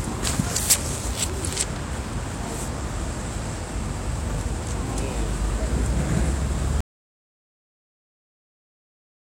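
At 6.81 s the sound stops abruptly in mid-flow and never returns: from there to the end of the clip there is dead, total silence, with no room tone, hiss or decay left underneath. This is an audio dropout to silence. The likely cause is that the input was lost, through a disconnected device, a broken link or an accidental mute, while the recorder kept writing silence, so whatever sounded after that point was never captured.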